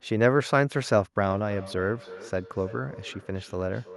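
A speech recording where, from about 1.3 s to the end, each phrase returns as a faint repeat roughly a third of a second later, peaking about 19 dB below the voice. That is feedback echo between two devices: one device's loudspeaker replays the other's microphone signal into the room, where that microphone catches it again, and neither echo canceller removes the other device's playback.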